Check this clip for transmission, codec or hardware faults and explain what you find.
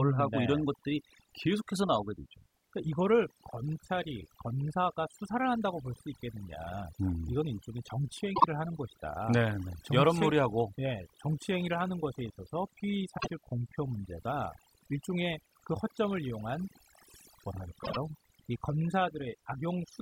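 Two faults are present: overdone noise removal across the whole recording, and three short bursts of frames out of order.

Overdone noise removal runs from start to finish. A noise reducer set too strong cuts narrow frequency bands wherever they sit near its noise estimate. Quiet speech detail goes too. The background drops and breaks up into twinkling specks.

Frames out of order occur at 8.35 to 8.44 s, 13.17 to 13.31 s, and 17.83 to 17.97 s. Two neighbouring blocks were swapped and decoded that way. The first swaps 24 ms blocks, which points to one frame each. The later two swap 48 ms blocks, which points to two frames each. Each sounds like a brief garbled flutter. No time is lost.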